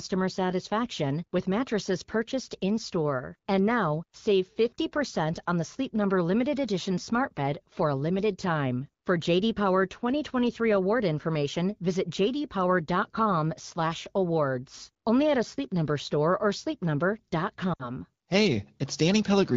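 Near 17.73 s the speech breaks up for about 0.17 s. These are lost AMR speech frames, roughly 60 ms of audio, which fits three frames. The decoder repeats its last good settings at falling gain. The sound drops to near silence within two frames and returns roughly at 17.91 s.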